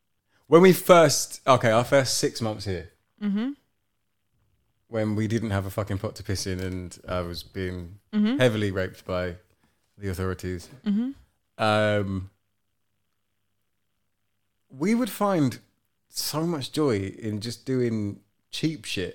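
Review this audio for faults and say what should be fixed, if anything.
Nothing to fix; no faults found in the speech recording, so no action is needed.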